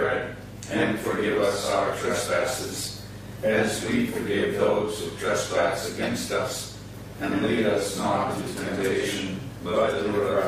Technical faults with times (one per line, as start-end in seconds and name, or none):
0.00-10.48 mains hum